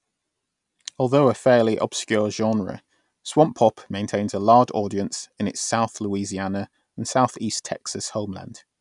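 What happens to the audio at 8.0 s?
Nothing goes wrong at 8.0 s; the speech carries on intact through that moment with no audible fault.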